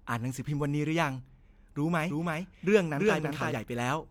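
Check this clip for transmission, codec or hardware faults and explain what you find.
One fault is present, a doubled audio track from 2.10 to 3.52 s. A full-band copy of the speech trails by about 300 ms, roughly 5 dB quieter. It likely comes from a second, slower capture path, and it starts and stops abruptly. A spectrogram shows the speech patterns repeated, shifted right.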